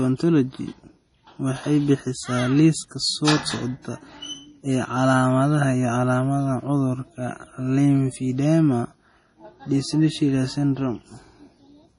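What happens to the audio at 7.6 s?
At 7.6 s the speech has the same damage heard across the whole clip: a hard treble ceiling with nothing above 10.6 kHz, plus watery, swirling sibilants and smeared consonant onsets. This is likely heavy MP3 compression, consistent with a low bitrate around 32 kbps. Starved of bits, the encoder drops the treble and zeroes weak frequency lines, which flicker between frames. That flickering shimmer is what separates it from a plain low-pass filter, which would only dull the sound.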